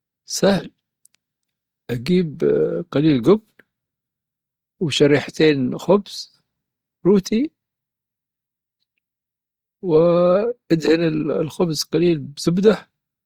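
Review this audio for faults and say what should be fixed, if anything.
The speech was likely passed through Opus compression in its music-oriented CELT mode at a low bitrate, around what 24 kbps would give, from start to finish. Short of bits, the encoder keeps each band's overall energy but fills the detail by folding in lower bands or noise, so the voice comes through grainy, rough and noisy rather than hollow, with the damage plainly audible and the spectrum stopping near 19.6 kHz. To prevent it, encode at a higher bitrate or keep an uncompressed master for delivery.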